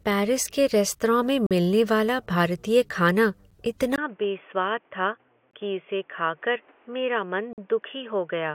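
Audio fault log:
1.47–7.58 s, gap between stream segments: hard-edged silent holes at 1.47–1.51 s, 3.51 s, 5.51–5.53 s and 7.53–7.58 s (43, 10, 22, 48 ms), spaced about 2 s apart by mismatched segment time stamps.
3.96–8.55 s, input switched to a poorer device: after 20 ms of silence, audio turns dull with nothing above 3.5 kHz, drops about 5 dB, and gains new background noise, likely from switching to a narrower-band microphone.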